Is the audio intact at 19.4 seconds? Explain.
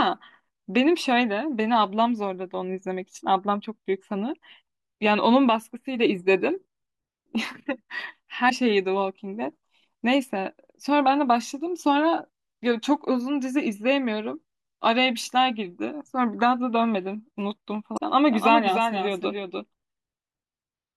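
No. At 19.4 seconds the speech carries a doubled audio track, which runs from 18.32 s to the end of the clip. A second full-band copy trails the original by roughly 300 ms at about 5 dB lower, most likely from the same signal being picked up again through a slower path. Unlike a room echo or reverb, this copy has no decay tail and no room colour, and it cuts in abruptly at 18.32 s.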